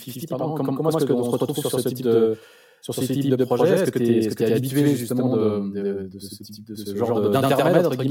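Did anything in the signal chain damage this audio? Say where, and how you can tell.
Yes. At the driver or buffer stage, one channel of this speech arrives about 85 ms late, which fits a 4096-sample buffer at 48 kHz, and the two channels are then summed to mono. This is channel delay (doubling), and it runs through the whole clip. Every syllable is followed by an equally loud copy, so the speech sounds doubled, like a single slap echo.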